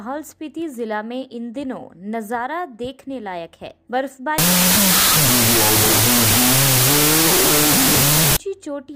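From 4.38 s to 8.37 s the audio becomes loud, harsh noise with the original faintly buried in it, at half speed and an octave low. This is wrong sample width, which fits 32-bit float data read as 16-bit integers. A plain sample-rate error would slow the audio without burying it in noise.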